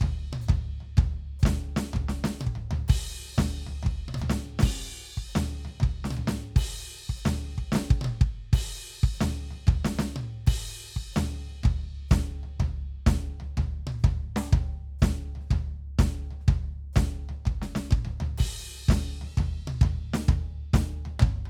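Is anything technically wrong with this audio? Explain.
Yes. The music has two drift correction steps, at 4.66 to 5.24 s (5.48% slower, about 98 cents flat) and 19.27 to 21.15 s (5.48% faster, about 92 cents sharp). Pitch and tempo lurch together by roughly a semitone, then snap back. This is likely clock-matching software abruptly changing the playback rate. On a spectrogram, the harmonic lines visibly step down or up, then return.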